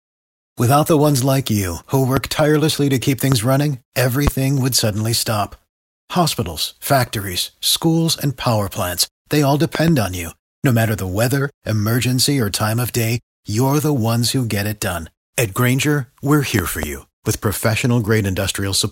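Loud pops hit at 2.17–2.19 s, 3.32–3.35 s after "tirelessly to keep", 4.27–4.30 s before "would suddenly stop", and as double pops at 9.75–9.91 s and 16.59–16.86 s. Each is a sharp thump about 15 dB above the speech, likely from a sudden voltage step. Unlike a dropout, the speech continues underneath.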